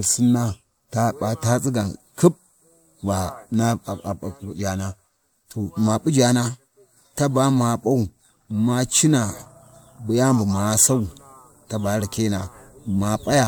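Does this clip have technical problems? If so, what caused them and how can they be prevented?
No, this clip has no technical problems.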